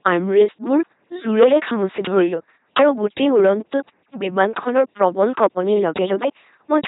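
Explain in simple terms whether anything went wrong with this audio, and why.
A couple of things went wrong here. The whole clip has passed through an LPC-10 vocoder, a very low-rate speech coder built for military radio. Instead of sending the actual sound, it sends a rough outline of the mouth's shape and then rebuilds the voice from either a buzz or a hiss, flipping between the two. That's why the speech sounds like a buzzy, mechanical robot. The damage is heavy, and nothing above about 3.9 kHz survives, so it's dull as well.

On top of that there's hard clipping in five stretches: 0.05 to 0.44 s, 1.39 to 2.20 s, 2.77 to 3.52 s, 4.76 to 5.46 s, and a short one at 6.72 to 6.77 s. In those spots the sound got louder than the system could handle, so the tops of the waveform were sliced off flat. Those flat edges add a harsh, crackly fuzz on the loud parts. It's roughest in the second and third stretches, where the overload goes furthest.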